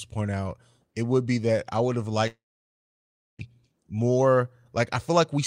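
A long network dropout runs from 2.27 to 3.43 s, right after "that I would have": the speech smears into a fading buzz, then falls silent for about a second. It resumes with 0.6 s lost, likely because packets stopped arriving, and plays roughly half a second later than before.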